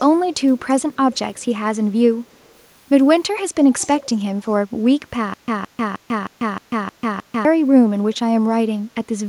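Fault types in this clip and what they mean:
Echo leak: A faint delayed copy of the speech returns about 336 ms after the original, in short scraps at 0.58, 1.13, 1.35, 2.32 and 3.79 s, the longest lasting about 0.3 s. It sits well below the direct speech, quietest near 2.3 s and clearly louder at 3.79 s. The likely cause is a far end on loudspeaker whose echo canceller let part of its microphone pickup through and sent it back down the line.
Stutter with silent gaps: From 5.34 to 7.45 s the same fragment of about 168 ms plays seven times, each followed by roughly 143 ms of digital silence, giving an even repeat every 311 ms. The likely cause is a player or stream that stalled, replayed its last buffered fragment on each retry, then ran empty. Whatever audio belonged to that stretch is missing rather than delayed.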